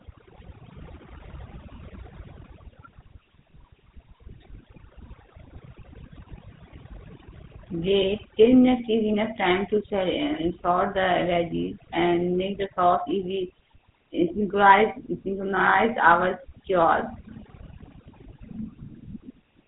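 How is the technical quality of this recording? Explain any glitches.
Technical quality is poor, with two faults running through the whole recording.

Overdone noise removal is present from start to finish. A noise reduction process set far too aggressively has pulled individual frequency bands down or out whenever they sat close to its noise estimate, taking quiet parts of the speech along with the noise. Between phrases the background drops to near silence sprinkled with twinkling specks. On a spectrogram the background shows as scattered isolated dots on a dark field, with holes torn in the weaker parts of the speech.

GSM full-rate codec damage is also audible throughout and plainly so. The speech has been squeezed through a vocal-tract model excited by evenly spaced pulses, which fits GSM full rate at around 13 kbps, and that gives it a gritty, buzzy roughness. Everything above 3.8 kHz is gone, so the sound is muffled and lacks sibilant sparkle. 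A spectrogram shows a hard ceiling at 3.8 kHz with empty space above it, and the harmonics below look coarse and smeared rather than cleanly striped.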